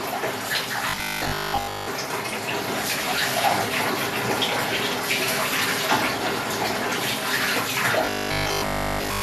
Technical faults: robotic sound from repeated short buffers

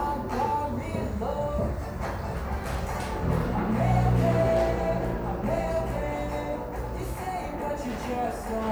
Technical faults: none

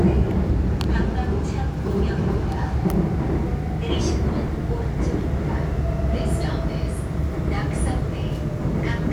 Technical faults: none

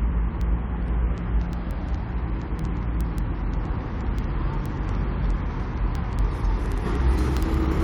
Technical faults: word clock ticks

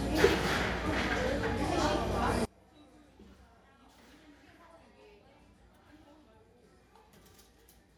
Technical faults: one channel inverted

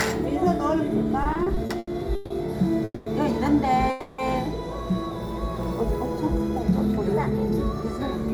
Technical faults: repeated stalls (stutter); call audio freeze

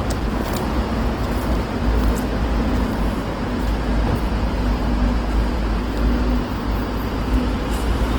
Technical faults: Opus compression

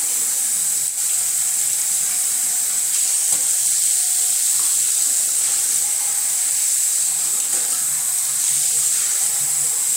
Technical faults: none

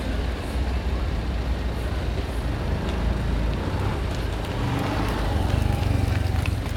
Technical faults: none

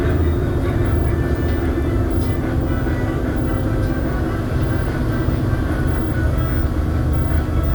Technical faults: low bit depth without dither

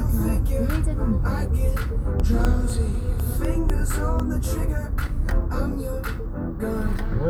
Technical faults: periodic USB or driver dropouts

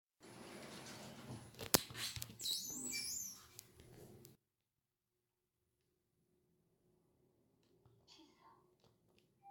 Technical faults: generation loss; one channel inverted

